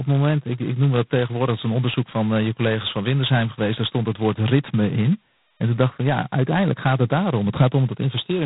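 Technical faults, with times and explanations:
Throughout: G.726 ADPCM. The speech carries a harsh, rasping hiss that rises and falls with its level, and nothing above 3.9 kHz survives. That coarse a rasp fits 16 kbit/s, where just 2 bits a sample must encode each difference from the adaptive prediction.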